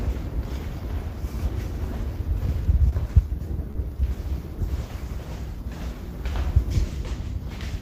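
Short concealed packet loss occurs twice, at 2.89 to 3.06 s and at 3.71 to 3.77 s. In each, a stretch of audio arrived too late for the decoder: about 20 ms the first time and 40 ms the second. The receiver covered the gaps by extending the preceding sound, for 24 ms and 34 ms respectively, then cross-faded back into real audio. At 2.89 s it also trimmed 6 ms to resynchronise. Each event is heard as a brief smear or wobble.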